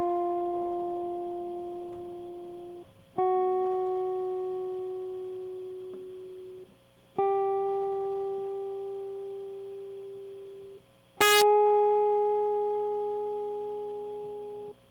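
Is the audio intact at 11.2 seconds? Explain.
No, from 11.21 to 11.42 s the music suffers integer overflow: peaks pushed about 1 dB past full scale wrap to the opposite sign, giving sharp cracks, seen as sudden full-range waveform flips and broadband vertical spectrogram streaks.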